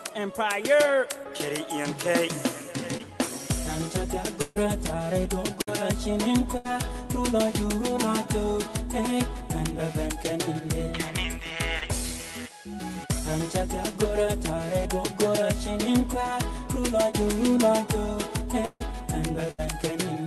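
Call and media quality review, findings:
Short concealed packet loss, 2.97–3.01 s and 11.79–11.83 s: brief smear or wobble. About 20 ms of audio never reached the decoder in time, so the receiver extended the preceding sound to fill the hole, then cross-faded back into real audio.

Burst of packet loss, 4.41–4.58 s, 5.62–5.69 s, 6.57–6.74 s and 19.51–19.60 s: held buzz or fading hiss, then a jump forward. Consecutive packets were lost, roughly 140, 60, 80 and 80 ms. The jitter buffer's concealment continued and attenuated the last sound, and that span of content is gone.

Long network dropout, 18.65–18.82 s: a held, decaying tail of about 150 ms ends in about 20 ms of silence, then audio resumes further on, about 160 ms of content skipped. The likely cause is a network outage where no packets arrived and concealment ran out.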